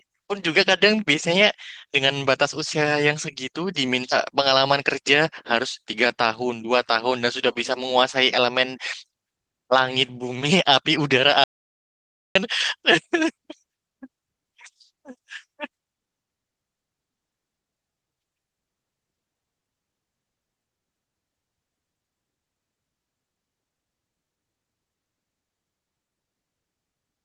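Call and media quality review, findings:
Audio dropout to silence, 11.44 to 12.35 s, about 0.92 s of speech lost. Hard cut to silence, no room tone, resumes mid-flow. Likely the input dropped (mic link or stray mute) while the 20 kbps Opus encoder kept writing silence.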